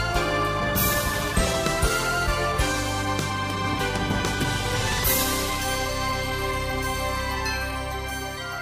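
From 4.81 to 5.04 s the processor falls behind and misses a short run of buffer deadlines, around five of them, each about 10 ms. Each miss replays stale audio with hard edges, producing processor overload crackle: a brief gritty tearing over the sound.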